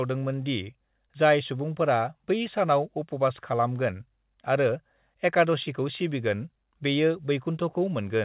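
Speech over a telephone line, with no technical faults.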